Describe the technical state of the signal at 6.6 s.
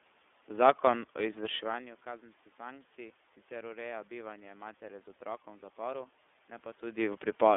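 At 6.6 s the speech is passing through the iLBC codec, which applies for the whole clip. The signal is confined to a telephone band of roughly 300 Hz to 3.5 kHz. Each 30 ms frame has its excitation coded independently of the previous one, a frame length that fits the 13.33 kbps mode. The result is clearly audible codec damage: a slightly rough, synthetic texture with no top end. The level shift around this point comes from the talker moving relative to the microphone.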